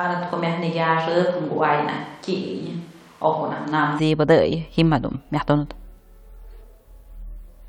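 From the start until 3.98 s the speech has most likely been picked up by a switch to a distant microphone, because the close microphone's signal was missing and a farther one stood in. The voice sounds roomy and hollow, with thinner bass, and sits roughly 5 dB lower, while room noise rises to around 30 dB below the speech. At 3.98 s the close, fuller sound returns abruptly.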